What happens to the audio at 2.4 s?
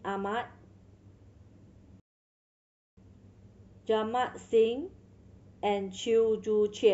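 At 2.4 s the speech is inside a rebuffering stall that runs from 2.00 s to 2.97 s. The player used up its downloaded audio and paused until more data arrived. This inserts about 0.97 s of dead silence. The speech then picks up exactly where it broke off, with nothing skipped. On a waveform this is a flat line across that span. On a spectrogram it shows as a blank vertical band, with the same spectral content on both sides of it.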